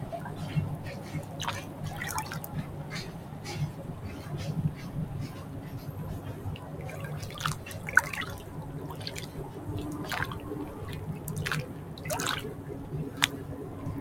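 This is a recording of sounds, processed throughout by a noise suppressor designed for speech. It treats sustained tones, ambience and decay as noise, letting onsets pass while held parts drop by around 5 dB, so the sound pumps, flutters or thins.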